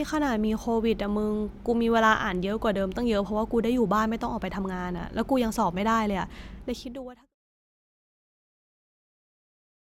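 No technical faults are audible in this speech.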